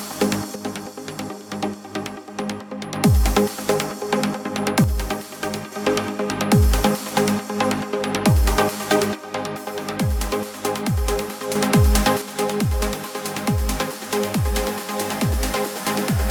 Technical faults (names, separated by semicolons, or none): one channel drops out